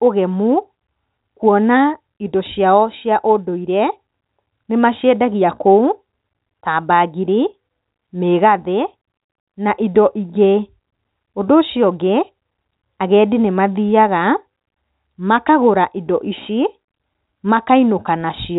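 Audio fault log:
No faults are heard in this speech. The G.711 telephone coding works normally: nothing comes through above about 3.8 kHz, and the quantisation noise that follows the signal level is faint at most.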